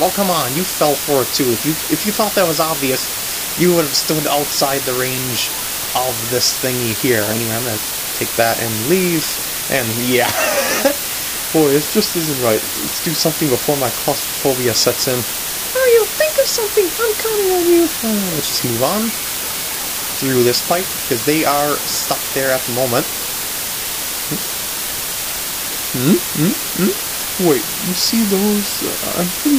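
From start to finish the audio is reduced to a very low bit depth with dither, only about 4 bits of resolution. Dither noise was added before the samples were rounded to so few levels, so the quantization error is spread into steady white noise rather than distortion that follows the signal. The result is a constant, even hiss sitting only about 5 dB below the sound itself, loud enough to nearly bury it, with no grit or crunch.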